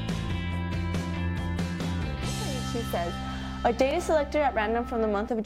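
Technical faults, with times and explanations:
No technical faults are audible.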